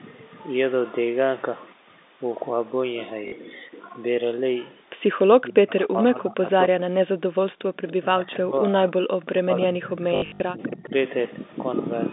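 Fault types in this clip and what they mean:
Packet loss with last packet repeated: Missing audio was filled by replaying the last packet received, so the sound stutters with a brief mechanical buzz. A 40 ms gap at 3.28 s is short, while around 10.16 to 10.4 s about 180 ms is lost across 240 ms, with the longest run at 60 ms, which fits 20 ms packets. Unlike a level dip, this sounds like a looping, robotic stutter.
Speech suppressed in double talk: The level sinks unevenly, in chunks, while the sound continues, likely because an echo canceller ducked the near talker while the far side was also talking. From 5.39 to 6.89 s it pulls down for about a second in total, at its deepest around 20 dB. From 7.27 to 10.93 s roughly three seconds are affected, at times about 25 dB down. Unlike packet repetition, it dips and thins rather than stuttering or buzzing.
Echo leak: At 5.99 s a faint, late copy of the speech arrives 284 ms behind the original, about 40 dB below it and lasting only a scrap. 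It likely comes from a loudspeaker on one side whose canceller let some microphone pickup return. It differs from the repeated-packet stutter in being a delayed re-sounding of earlier speech laid over the current audio, rather than the same tiny fragment looped in place.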